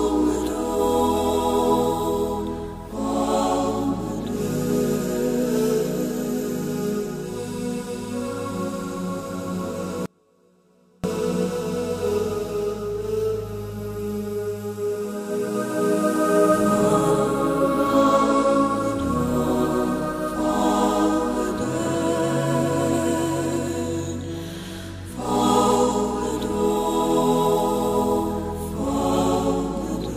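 At 10.06 s the wanted signal was most likely lost somewhere upstream while the path after the break stayed live, giving an audio dropout to a faint residue. The sound cuts off abruptly and returns just as abruptly at 11.04 s, leaving a gap of about 0.98 s. Through that gap only a faint leak of the sound remains, somewhere around 35 dB below its normal level, so the break sounds like a hard cut rather than a pause or fade.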